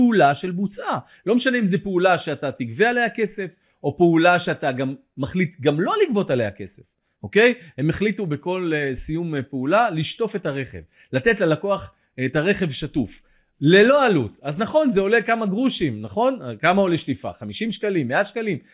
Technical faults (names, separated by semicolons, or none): none